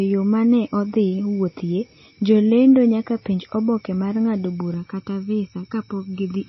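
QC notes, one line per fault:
Throughout: MP3 compression. The encoder was likely starved of bits, consistent with a low bitrate around 24 kbps, so it discarded everything above 5.8 kHz and dropped weaker spectral detail frame by frame. The speech sounds dull and band-limited. Sibilants lose their edge and turn metallic, and a watery, swirling texture follows the voice as lines flicker in and out between frames. Consonant onsets are smeared rather than crisp, and the damage is plainly audible.
4.74 to 6.49 s: channel delay (comb filtering). Starting right after "penj oboke mar ng’ado", one channel falls behind the other by about 0.7 ms, and the two are combined to mono. Content shared by both channels cancels at evenly spaced frequencies, with the first notch near 700 Hz and further notches at regular intervals above it. The voice turns hollow and phasey until the end, as if heard through a tube.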